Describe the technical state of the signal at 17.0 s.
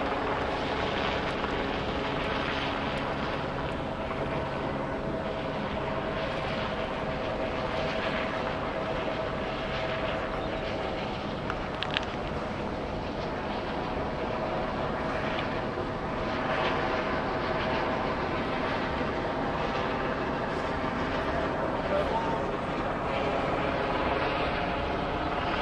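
At 17.0 s the signal is intact, with no audible technical fault.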